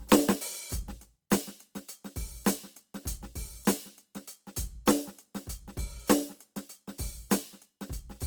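Throughout the music, likely Opus compression in its music mode, at a rate that fits about 24 kbps, leaves too few bits for every band. Starved bands get filled with folded or noisy content, so tones turn grainy and rough, though the range still reaches 20.2 kHz.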